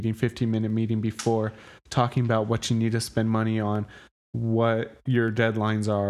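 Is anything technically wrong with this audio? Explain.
Yes, there are regular clicks in this speech from about 0.70 s to 5.28 s, roughly four of them, spaced 1.52 s apart. That steady spacing points to clock drift buffer slips, likely two clocks disagreeing by around 100 ppm, so a handful of samples gets dropped or repeated each time.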